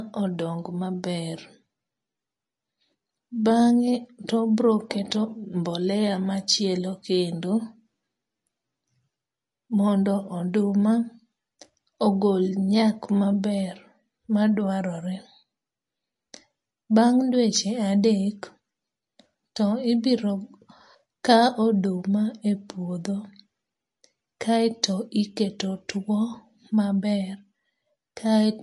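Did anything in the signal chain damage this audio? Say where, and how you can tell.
Yes. MP3 compression runs throughout the speech, likely introduced at the codec stage. Nothing survives above 11.3 kHz, and the plainly audible watery or swirly texture shows an encoder short of bits zeroing weak frequency lines frame to frame, which fits a bitrate around 48 kbps.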